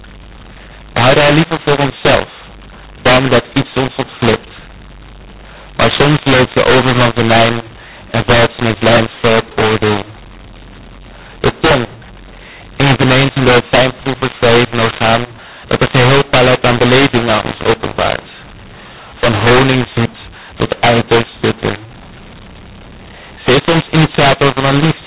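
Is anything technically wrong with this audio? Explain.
Yes. Throughout the speech, mu-law and A-law are mixed up: telephone audio coded as A-law is decoded as mu-law, so sample levels are scrambled, producing harsh distortion and noise-filled pauses, while the band limit near 4 kHz remains.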